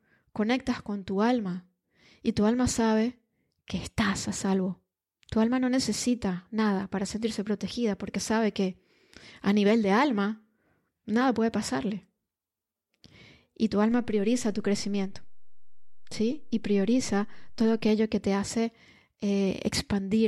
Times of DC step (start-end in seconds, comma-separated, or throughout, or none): 13.92-17.89